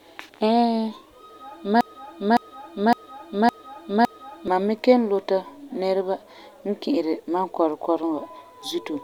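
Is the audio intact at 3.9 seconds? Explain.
No. At 3.9 seconds the speech is caught in a broken-record loop running from 1.81 to 4.48 s. A single 0.56 s fragment repeats back to back five times, likely because the player or stream stalled and kept resending the last chunk it held. The speech that should fill that span is lost. On a spectrogram the same block of patterns repeats identically every 0.56 s, and the waveform shows matching envelope shapes recurring at that spacing.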